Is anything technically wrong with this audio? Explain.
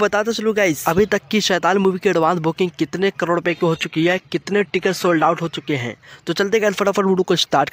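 Yes. From 3.47 to 5.47 s the audio drops to an adaptive stream at a lower bitrate for two seconds. The player switched to a cheaper encoding, most plausibly when the connection slowed, with no gap at either change. The sound turns thinner and dull, with more codec artefacts, consistent with a switch from a roughly 96 kbit/s AAC stream to a 24 kbit/s HE-AAC one. On a spectrogram, everything above 14.9 kHz is empty for that window, with sharp vertical edges at both ends. The waveform stays continuous.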